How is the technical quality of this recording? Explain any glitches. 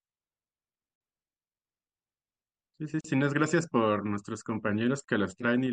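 The speech is broken by two short dropouts, each a gap at a join of encoded pieces. At 3.01 s and again at 5.04 s, the sound drops out for about 38 ms, with smeared edges, then resumes exactly where it left off. The 2.0 s spacing points to audio encoded in separate chunks and spliced untrimmed. Each piece's encoder start-up delay and padded final frame remain as silence at every seam.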